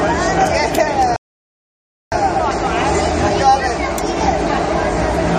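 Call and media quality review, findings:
Rebuffering stall, 1.16–2.12 s: playback drops to silence for about 0.96 s, then resumes exactly where it stopped. Player buffer underrun; no content lost, time added.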